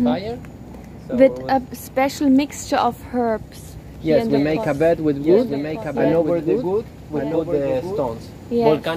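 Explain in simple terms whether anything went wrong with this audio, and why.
From 4.74 s to 8.3 s there is a doubled audio track: a second, somewhat quieter copy trails about a second behind. It is likely a second capture or a misaligned edit. Unlike an echo, it never fades or sounds roomy, and it starts and stops abruptly.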